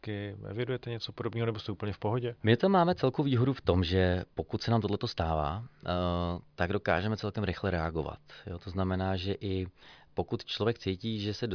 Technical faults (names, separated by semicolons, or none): none